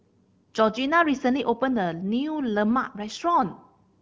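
No technical faults are audible.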